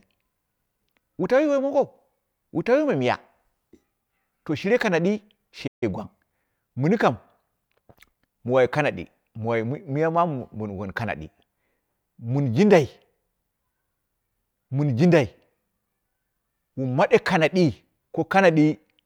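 At 5.67 s, just after "to shire kanadi", the player likely ran dry of data in a playback stall, so the speech cuts out for about 0.15 s. From 5.83 s to 7.27 s, time-compressed catch-up trims the backlog by splicing out short pieces, so the speech runs about 1.1 times fast at unchanged pitch.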